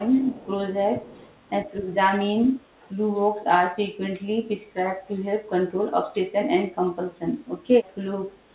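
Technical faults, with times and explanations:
0.00–0.46 s, 1.14–1.40 s and 7.15–7.19 s, echo leak: a faint delayed copy of the speech trails it by 118 ms, roughly 25 to 40 dB down, likely residual loudspeaker echo the far-end canceller failed to remove.
0.41–0.47 s, 0.90–1.03 s and 2.40–2.69 s, speech suppressed in double talk: the speech dips by about 5 dB, then 10 dB, then nearly drops out at about 35 dB, likely the echo canceller attenuating during overlapping talk.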